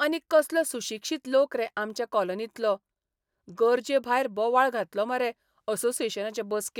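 Speech recording with no technical faults to report.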